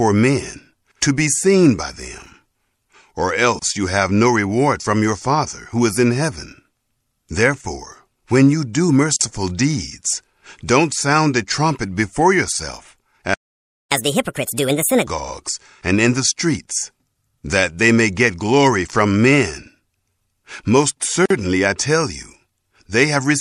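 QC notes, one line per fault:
Throughout, MP3 compression: watery, swirly artefacts plainly audible across the speech, likely from MP3 encoding at a low bitrate, around 64 kbps, where weak frequency lines drop in and out.
3.59–3.62 s, 9.16–9.21 s and 21.26–21.30 s, gap at a join of encoded pieces: short holes of 26.5, 46 and 47.5 ms, from encoder delay and end padding left in at the joins. The first comes just before "you have no reward", the second between "when you do" and "deeds don't sound a".
13.34–13.92 s, playback stall: the audio cuts out mid-flow for about 570 ms, likely the player running dry or getting blocked, then resumes where it stopped.
13.92–15.07 s, catch-up at higher speed: right after "a trumpet before yourself" the audio runs 1.5 times fast and roughly seven semitones high while the player resamples its backlog to win back the stalled time.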